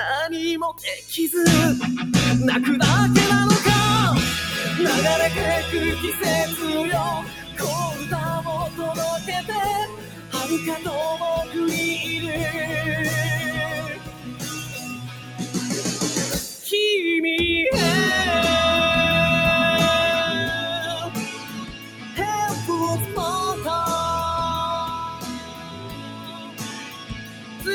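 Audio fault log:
throughout: noise suppressor applied to music or sounds. A speech-oriented noise suppressor stays active across the whole clip and keeps judging sustained, steady material as noise. Its gain shifts by around 15 dB as it decides what to keep, so onsets pass largely intact while held tones, ambience and decays are pulled down behind them. The result is audible pumping and fluttering in level and a thinned, dried-out body to the sound.
7.21–7.62 s, 7.94–8.12 s, 9.18–9.49 s, 9.86–10.87 s, 13.75–16.66 s, 20.91–22.19 s, 25.04–27.67 s: sound cut by the noise suppressor. In these stretches the suppressor classifies the sound as noise and attenuates it more than the rest. The drops reach about 10 dB, 6 dB, 10 dB, 12 dB, 11 dB, 11 dB and 12 dB respectively. The longer spans from 13.75 s onward lose several seconds of sustained content, which sinks in level or has its tail cut short, while sharper transients within them still come through.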